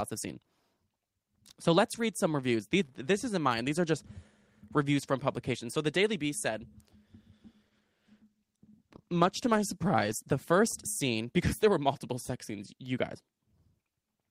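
From 7.66 s to 11.05 s the speech goes through a call bitrate drop. The connection's bandwidth estimate fell, so the encoder had to code with far fewer bits, which fits a fall from about 32 kbps to about 17 kbps, held at its lowest for about 2.6 s. The speech turns rougher, more watery and duller, with the top end thinned, until clarity returns just before "because there were multiple". Unlike packet loss, the sound keeps flowing without gaps or glitches. Unlike a fixed band-limited line, the degradation arrives and clears within the call.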